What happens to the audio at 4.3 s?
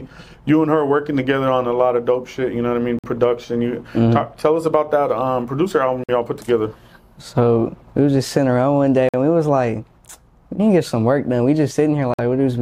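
Nothing goes wrong at 4.3 s: the audio plays through that moment intact, with no dropout, click or distortion.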